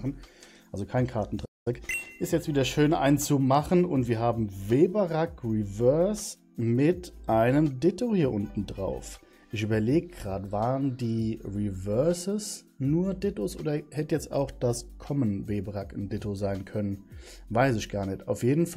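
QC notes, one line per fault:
1.45–1.68 s playback stall: the player likely ran out of data or was blocked, so output falls silent for 0.21 s mid-flow, then resumes.
1.68–2.08 s time-compressed catch-up: the player trims its backlog by cross-fading out short slices, so audio runs 1.5 times fast at normal pitch.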